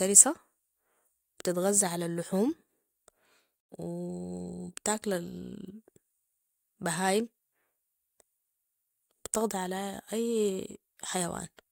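At 3.60 s the speech drops out in a digital broadcast dropout, falling silent until 3.73 s. The receiver stopped getting decodable frames, either through signal loss or failed checksums, and muted its output rather than play corrupt data. The cut is a fast fade of about 8 ms, not a hard click, and roughly 85 ms of programme is simply missing, which fits two lost frames. The speech resumes where the next good frame picks up.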